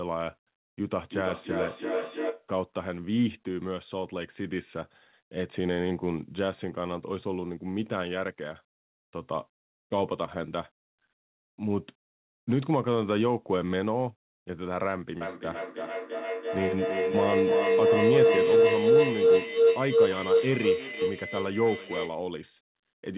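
A tone swells at 0.8 s, near 500 Hz and about 2 dB under the speech, until 2.52 s. From 15.21 to 22.28 s a far louder shriek around 5 kHz rises to about 14 dB above the speech. In both, the loop repeats roughly every 300 ms. This is feedback howl: two devices in the same room share the call, so the microphone-to-loudspeaker loop gains level on every pass and locks onto one pitch.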